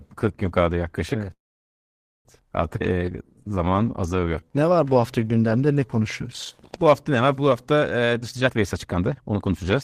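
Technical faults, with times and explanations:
1.33–2.28 s, call audio freeze: right after "gün kaldı yaklaşık" the speech stops and a brief continuation of the last sound dies into about 0.89 s of silence, a filled gap of about 0.92 s. Speech then resumes exactly where it stopped, with nothing lost. The likely cause is packets held up in transit until the jitter buffer ran dry. Unlike a skip ahead, this inserts time instead of removing it.
2.79–2.83 s, skip ahead: playback jumps forward over roughly 0.4 s of speech. Only about 12 ms of filler bridges the join, so the two sides meet almost directly and the cut sounds abrupt rather than paused. The missing stretch was discarded while later audio was already queued, pulling the delay back down. This differs from the freeze because no gap is heard but content is gone.
2.94–5.86 s, jitter buffer slow-down: the speech runs at about 86% speed while keeping its pitch, sounding drawn out. 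The receiver repeated single pitch periods and slivers of pauses many times over, adding about 404 ms in total to rebuild a reserve. A tape-style slowdown would lower the pitch. Here the pitch stays put, which marks this as buffer stretching.
8.22–9.83 s, jitter buffer speed-up: the speech runs to the end at about 125% speed with unchanged pitch, sounding hurried. The receiver trimmed short pieces of one or a few pitch periods again and again, removing roughly 0.4 s in total, to shrink a buffer that held more than its target. Unlike the single abrupt skip ahead, the loss is spread across many small cuts, so it sounds rushed rather than cut.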